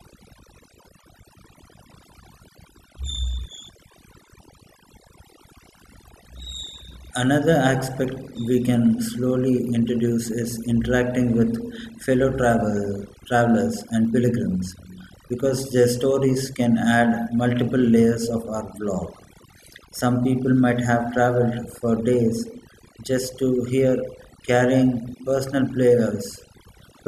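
Throughout the speech, overdone noise removal is at work: the noise reduction was set too aggressively, muting individual frequency bands wherever they came close to its noise estimate. Softer speech detail vanishes too, leaving near-silent gaps flecked with twinkling specks.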